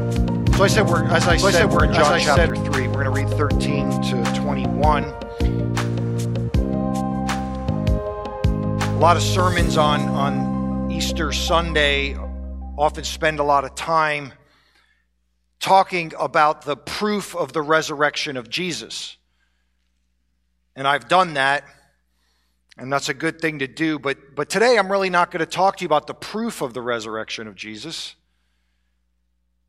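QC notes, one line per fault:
0.0–2.5 s, doubled audio track: under way when the clip opens, a full-band copy trails the sound by roughly 0.7 s at about equal level, then cuts off abruptly at 2.5 s. The likely cause is a slower capture path. Unlike echo, it has no decay or room colour.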